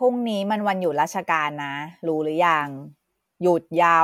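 No technical faults can be heard anywhere in this speech.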